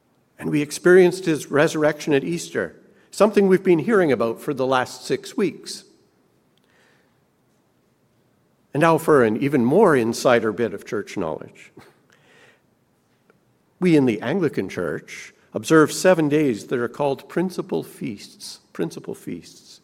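No technical faults can be heard anywhere in the audio: the signal stays continuous and steady throughout, with nothing that points to a problem in how it was captured or passed along.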